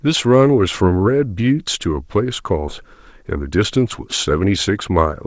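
At 2.68 to 2.70 s the speech makes a skip ahead. Roughly a second of audio never reaches playback, either lost in transit or discarded by a jitter buffer that had overflowed while later audio was already queued. Nothing fills the hole, so the sound on one side of the jump butts almost directly against the sound on the other. The listener hears an abrupt splice, with a chunk of the utterance simply gone.

From 2.82 s to 5.26 s a jitter buffer speed-up follows. The buffer is still holding more audio than its target, so the receiver trims it back by cutting out pieces one or a few pitch periods long, over and over, removing around 200 ms in total. Playback runs at about 107% of normal rate while the pitch stays where it was, so the remaining speech comes across slightly rushed. All of this rides on the G.722 call path at 64 kbps, which carries nothing above 8 kHz.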